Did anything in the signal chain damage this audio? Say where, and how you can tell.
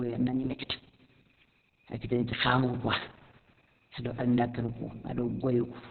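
Yes, at the codec stage. Opus voice compression runs throughout the speech. Nothing is heard above 4.3 kHz, so the band is narrowband. The voice sounds muffled, hoarse and slightly robotic. Heavy damage like this points to SILK coding at roughly 6 kbps, with coarse excitation.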